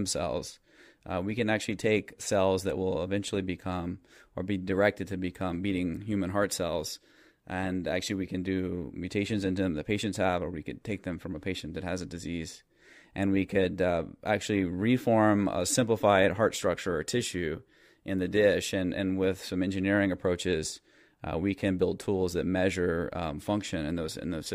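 Nothing technical goes wrong anywhere in this bit of speech, so there's no fault here to point to.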